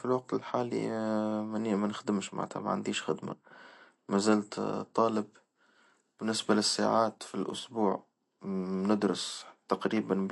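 A speech recording, likely put through heavy MP3 compression, consistent with a low bitrate near 48 kbps: nothing survives above 11.2 kHz, and the damage is plainly audible as a watery, swirling texture. From 5.13 to 7.59 s, pre-emphasis is left on with no matching de-emphasis, consistent with the CD 50/15 µs curve, lifting 10 kHz about 8 dB over 1 kHz and making the sound thin, bright and sibilant.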